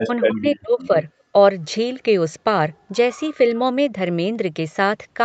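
From 0.05 to 0.96 s the speech dips deeply for most of that stretch, likely speech suppressed in double talk, with the echo canceller muting both overlapping talkers. At 1.24 to 1.33 s the room sound drops by about 19 dB for a moment: background gated by the echo canceller while the far end played.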